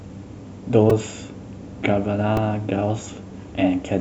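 At 0.90 s and 2.37 s, repeated buffers: late audio made the device replay a tiny chunk, which fits a 128-sample buffer, giving a brief click-buzz. The waveform shows identical cycles, and the spectrogram a thin vertical stripe.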